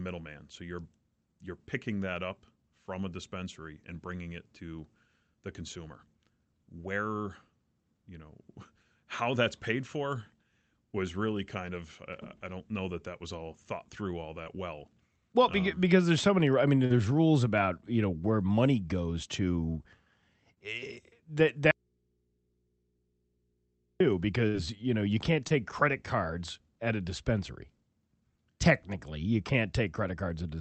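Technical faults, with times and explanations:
14.43–14.48 s, 16.86–16.92 s, 20.54–20.58 s and 25.48–25.52 s, short concealed packet loss: each time a sliver of the call arrived too late for the decoder, about 20 ms at the first, third and fourth and 40 ms at the second. The receiver extended the preceding sound, tracking its pitch when voiced or as shaped noise otherwise, then crossfaded back, giving a brief smear or wobble after "all thought through all", after "so many I mean", and between "know you can't" and "credit cards at a".
21.71–24.00 s, audio dropout to a faint residue: the speech cuts off abruptly and stays gone for about 2.3 s, then returns just as suddenly. The gap is not silent but holds a low mains hum far below the speech level, which points to the wanted signal being lost while the input path after the break stayed live, an abrupt loss rather than a pause or fade.
24.48–24.56 s, burst of packet loss: roughly 60 ms of consecutive audio went missing just after the speech resumes. 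The receiver carried the last sound forward and let it decay over the hole, so the moment comes across as a short held buzz or fading hiss. The speech then picks up further along with that stretch absent. Throughout, the Opus call path's top end stops near 8 kHz.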